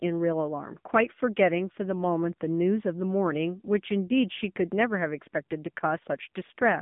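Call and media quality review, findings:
AMR narrowband mobile codec, throughout: buzzy, synthetic speech; spectrogram blank above 3.7 kHz, band 150 Hz to 3.6 kHz; damage fits a low AMR-NB mode near 7.95 kbps.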